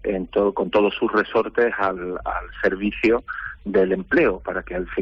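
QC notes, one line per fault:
Throughout: clock drift between sender and receiver. The sound runs slightly slow and unsteady for the whole clip, with small timing hiccups at uneven intervals instead of one clean tempo. The sender's audio clock runs about 2% slower than the receiver's, so the jitter buffer keeps draining and the receiver has to stretch the stream out to stay fed, which leaves a faint lurch wherever it patches the gap.
0.41 to 4.97 s: repeated timing corrections. Across this stretch the playback drags to about 98% speed, with scattered slight stutters where short slices are repeated, all pushing the same way. Together they add roughly 70 ms over the span. Each repeat is tiny and unevenly spaced, so it comes across less as a glitch and more as a wobbling, hesitant pace while the receiver keeps padding the audio to make up for the slower sender.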